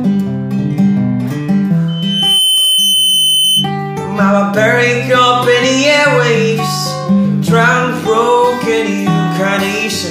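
At 1.88 s a loudspeaker feedback squeal kicks in: a pure tone at 3 kHz that swells up over roughly half a second until it's sitting about as loud as the sound itself, then hangs there until it cuts out at 3.72 s. What's happening is the mic is hearing its own speaker, and at 3 kHz the loop gain tips past one, so that frequency just keeps feeding itself until the loop gets broken.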